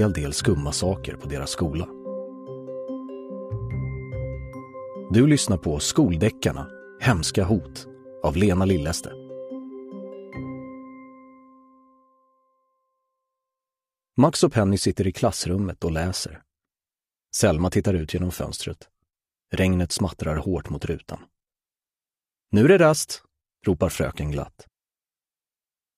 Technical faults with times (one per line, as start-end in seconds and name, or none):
none